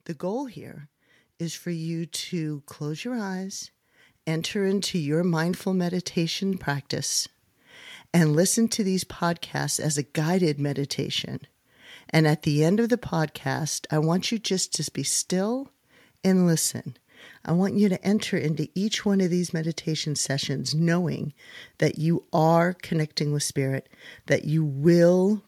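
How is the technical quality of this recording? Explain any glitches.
The recording has one clear technical fault, at the very start. From 0.19 s to 7.2 s, automatic gain rising: the gain control judged the input too quiet and pushed its gain up by about 10 dB. Voice and background noise swell together over these seven seconds, whereas a talker moving closer would lift only the voice.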